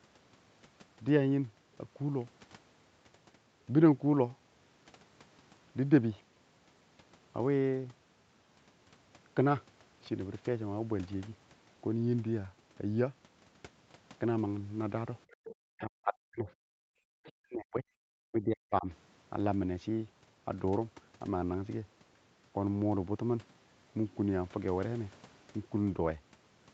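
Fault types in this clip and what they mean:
Other side's voice leaking through: The echo canceller likely left part of the loudspeaker signal in the microphone, so a second, fainter voice sits well below the talker, briefly around 15.3 to 15.84 s and in short scraps at 16.5 s and 17.24 s.
Background gated by the echo canceller: While the loudspeaker played, the canceller clamped the microphone down hard, so the room sound drops by about 32 dB from 15.36 to 15.56 s and about 31 dB from 16.77 to 16.99 s, then returns.
Speech suppressed in double talk: With both sides talking at once, the canceller likely confused the talker with the echo and turned everything down, so the talker's voice sinks deeply or breaks up from 15.84 to 16.49 s and again from 17.27 to 18.88 s.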